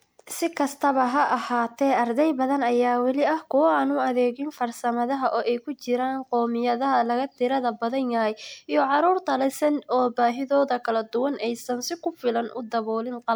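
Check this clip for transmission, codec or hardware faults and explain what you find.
A codec fault is present for the whole recording.

Generation loss, throughout: the speech sounds swirly, hollow and smeared, with blurred attacks. It is likely from about three MP3 re-encodes at around 128 kbit/s, each stacking fresh quantisation noise on a shifted frame grid.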